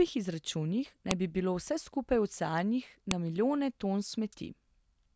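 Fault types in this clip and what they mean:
File header played as audio: two sharp, loud clicks cut across the speech, at 1.11 s just before "bi bilo vse skupaj" and again at 3.11 s, two seconds apart. Audio pieces were joined without stripping their headers, so those header bytes play back as a brief burst of samples.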